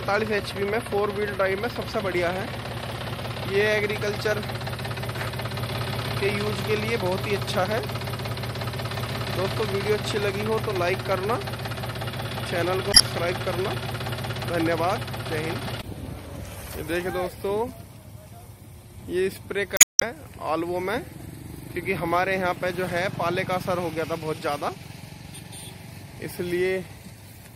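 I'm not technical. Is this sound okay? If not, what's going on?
No. MP3 compression, throughout: the sound is dull at the top and has a watery, swirly quality, likely from squeezing it into a small MP3 file. To save space, the encoder discards the highest frequencies and drops quieter details, which then flicker in and out.

Damaged data in a compressed stream, at 12.90 to 13.01 s and 19.74 to 20.03 s: short glitches, a chirp, squawk, click or brief gap, break the sound. Part of the file is corrupted there, so the player misreads those pieces and has to search to find its place again.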